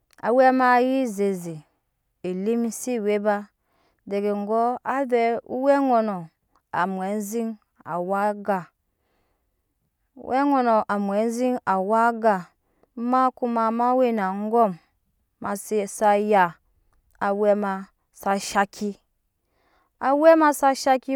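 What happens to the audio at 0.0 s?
Nothing goes wrong at 0.0 s; the speech starts cleanly and the audio is intact at that moment.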